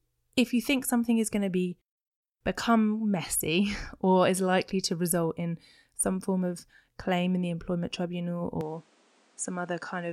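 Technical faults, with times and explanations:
8.61 s to 10.12 s, input switched to a poorer device: at 8.61 s the speech abruptly loses its top end, with nothing above 10.5 kHz, and drops about 5 dB in level, with no gap at the change. A faint new background noise appears, well below the speech. The likely cause is the recording moving to a different, narrower-band microphone, whose own response, gain and self-noise take over until the end.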